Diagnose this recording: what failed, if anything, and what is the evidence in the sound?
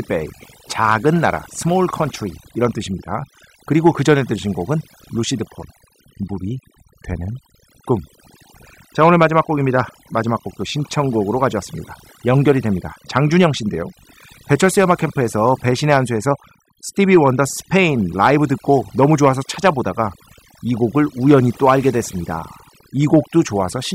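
Overdone noise removal throughout this speech, at the call-processing stage. Near-silent gaps carry twinkling specks. Quiet vocal detail vanishes with suppressed bands.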